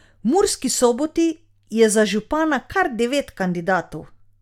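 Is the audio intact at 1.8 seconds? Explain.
Yes, the speech at 1.8 seconds plays through intact, with no audible dropout, click, distortion or other technical fault at that moment.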